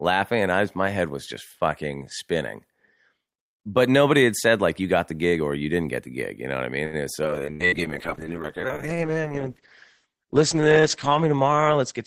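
A speech clip with four network-related faults in its second half. Just after "know what I mean", at 6.85 to 6.96 s, there is a short stall from a late packet. The receiver's jitter buffer ran dry, so the last sound was stretched by about 77 ms until the packet arrived, and playback resumed from the same point with nothing lost. It is heard as a sound held a little too long with a slight buzz or dip. On a waveform this shows as a briefly repeated, slightly flattened stretch, and on a spectrogram as harmonics frozen horizontally for that moment. From 7.24 s to the end there is a call bitrate drop. The encoder was pushed to far fewer bits, and the coarseness fits a fall from about 48 kbps to around 9 kbps, held at its lowest for roughly 4 s. The audible bandwidth collapses from 20 kHz to 8 kHz, so the speech turns muffled and watery. A spectrogram shows the upper band abruptly going empty above 8 kHz, with smeared, blotchy energy below. 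Inside that stretch come two bursts of packet loss, at 7.53 to 7.63 s and 7.66 to 7.75 s. In each, about 60 ms of audio is missing, and the receiver filled 68 ms and 62 ms respectively by extending the last sound and fading it, before the speech jumps ahead. On a waveform these look like tapering, repetitive segments followed by abrupt discontinuities. On a spectrogram they appear as smeared, fading patches with a hard edge where real audio returns.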